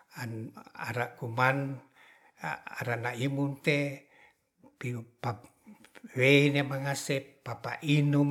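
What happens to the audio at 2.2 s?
Nothing goes wrong at 2.2 s; the speech carries on intact through that moment, with no dropout, click or distortion to be heard.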